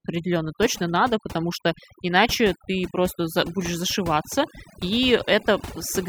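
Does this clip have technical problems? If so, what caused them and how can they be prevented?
Yes. The background drops to near silence throughout, scattered with twinkling specks. This is overdone noise removal: the reducer's threshold sits too high, so it cuts every frequency band near its noise estimate, taking quiet speech detail too. Gentler reduction settings prevent it.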